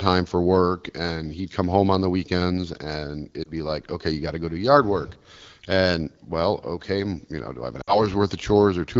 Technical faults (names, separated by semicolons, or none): lost AMR speech frames